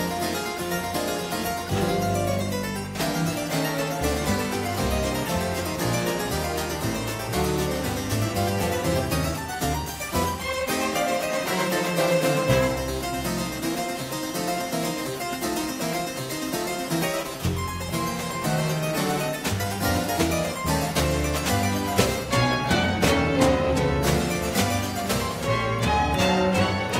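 From start to finish, timecode bleed runs behind the sound: linear timecode at 23.976 frames per second leaks in, roughly 25 dB down, as a chirping warble that flips between tones near 1 and 2 kHz. Unlike a steady whine or hum, it never holds one pitch.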